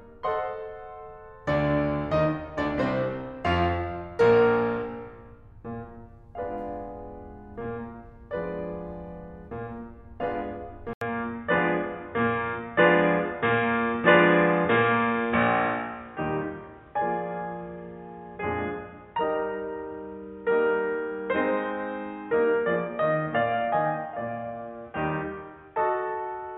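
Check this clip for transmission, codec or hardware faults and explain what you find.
One hardware fault is present in this music recording. From 10.93 s to the end, the input switched to a poorer device. This is likely a changeover to another microphone or headset. After an 80 ms silence, nothing above 3.8 kHz remains. The music turns dull and boxy, shifts in level by about 5 dB, and carries a faint new background noise well below it.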